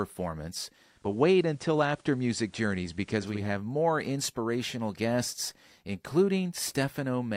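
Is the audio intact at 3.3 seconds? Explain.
No. At 3.3 seconds there is faint hiss roughly 40 dB down and a level shift of about 1 dB. This is digital radio blending to analogue, from 0.82 to 3.53 s, just before "more inspirational guests": the receiver lost the digital signal and cross-faded over 355 ms to the FM broadcast, then back.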